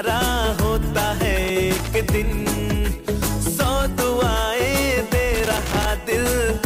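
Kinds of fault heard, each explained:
Loose connector crackle: a worn contact making and breaking chops the signal, heard here as irregular scratchy bursts from 1.43 to 1.88 s and 5.34 to 5.88 s.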